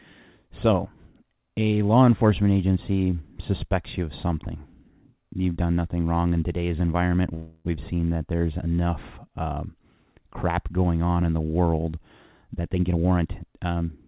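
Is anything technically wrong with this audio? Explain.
Yes, there are two faults in this speech.

From 7.34 to 7.67 s there is a call audio freeze. Packets were most likely held up in transit, leaving the jitter buffer empty for about 0.31 s. The receiver filled that stretch by stretching out the last sound it had, so a buzzy, hissing tail fades without reaching silence. When the packets arrived, the speech resumed exactly where it had stopped. Nothing was lost, but the pause pushes everything after it later.

From 12.49 to 13.89 s there is a jitter buffer speed-up. The buffer held more audio than its target. To work that excess off, the receiver repeatedly cut out short pieces one or a few pitch periods long, removing roughly 0.3 s in total. The result plays at about 119% speed at unchanged pitch, so the speech sounds rushed. The G.711 mu-law call path keeps nothing above 4 kHz, and that band limit applies throughout.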